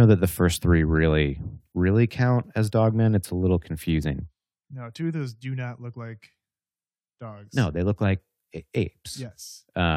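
Speech, and nothing in it stands out as a technical fault, so there's nothing to flag here.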